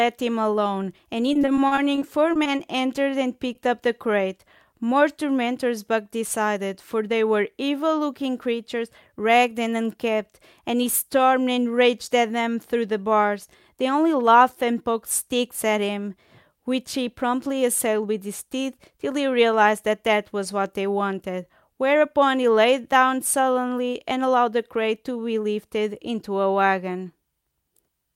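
From 1.33 to 2.61 s the speech turns choppy and robotic, with small pieces dropping out. This is repeated packet loss: a run of short gaps, none longer than 40 ms, each patched by extending the previous sound, so concealment covers about a fifth of that stretch.

Right after, from 2.68 to 3.11 s, the speech drags slightly, with drawn-out sounds at unchanged pitch and running at 89% speed. That is a jitter buffer slow-down: the receiver repeated short pitch periods to rebuild its reserve, adding 56 ms.

At 3.53 to 3.57 s a brief smear or wobble marks a short concealed packet loss. Twenty milliseconds of audio arrived too late and was filled by continuing the preceding sound before blending back into the real signal.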